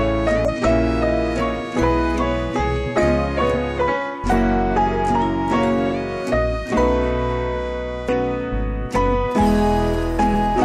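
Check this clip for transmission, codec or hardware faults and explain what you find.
Two kinds of fault are audible: five brief decoder glitches and a stretch of radio-phone interference near the end.

Short chirps or blips occur at 0.45–0.50 s, 3.52–3.55 s, 5.87 s, 8.09 s and 10.30–10.32 s. This is damaged data in a compressed stream. Corrupted bytes make the decoder misread frames, lose sync and jump to the next valid header.

From 9.31 to 10.47 s a galloping dit-dit-dit of short buzzes at about 217 Hz sits roughly 25 dB below the audio. These are GSM signalling bursts: a nearby 2G phone sends short bursts of radio activity, and the audio circuitry rectifies them into audible noise.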